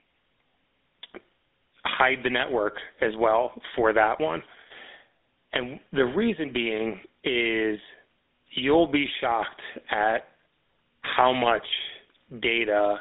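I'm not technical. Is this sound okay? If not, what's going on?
No. The speech went through a GSM full-rate codec, the early mobile-phone compression that rebuilds the voice from a coarse pulse pattern. Throughout the clip this adds a buzzy, gravelly roughness, and the line keeps only 250 Hz to 3.7 kHz, so it sounds thin and muffled.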